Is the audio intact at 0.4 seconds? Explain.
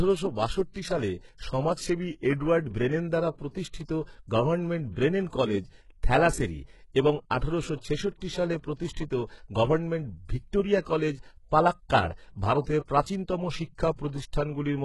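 No. At 0.4 s, as throughout, the speech carries heavy HE-AAC compression damage, likely from a very low bitrate near 12 kbps. Treble is rebuilt by copying lower bands upward, so s sounds turn gritty and metallic, with nothing above 11.5 kHz.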